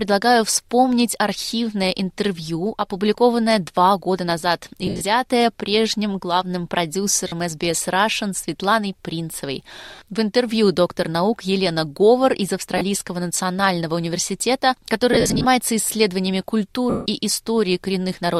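Lost LE Audio frames break up the sound six times: 4.87 to 5.02 s, 7.28 s, 9.95 s, 12.78 s, 15.13 to 15.45 s, and 16.90 to 17.06 s. Each time the decoder patches the gap by replaying the last spectrum with scrambled signs, so tones smear into a noisy hiss. The shortest gaps, around 30 to 40 ms, fit a few 10 ms frames. The 4.9 s and 15.1 s patches are scattered dropouts with runs up to about 70 ms. The 160 ms gap near 17 s sags audibly as the concealment fades.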